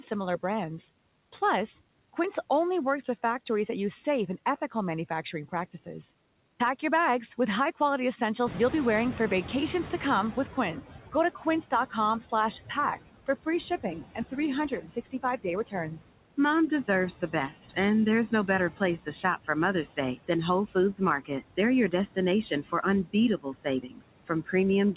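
Noise suppressor artifacts run through the whole recording. The suppressor pulls down each frequency band it judges to be steady noise, frame by frame, by about 17 dB. The background therefore dips in the gaps between phrases and swells back up underneath the speech.

Noise suppressor catching up occurs from 8.46 to 10.85 s. The room noise jumps by about 13 dB at roughly 8.5 s, and the suppressor's noise estimate trails behind that rise. For 2.39 s the louder background leaks through with only about 10 dB of reduction, so more noise sits under the speech. It then sinks as the estimate adapts to the new level.

Speech cut by the noise suppressor happens three times, where the suppressor mistakes parts of the speech for noise and turns them down with the background. Between 10.53 and 11.92 s, quiet moments drop by up to about 9 dB over roughly 150 ms in total, so parts sound swallowed. From 13.27 to 17.77 s, just before "and there's", the drop deepens to about 15 dB across roughly half a second of speech, leaving syllables faint and swallowed. 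From 18.3 s to the end, after "and there's", soft passages fall by up to about 17 dB and sound faint.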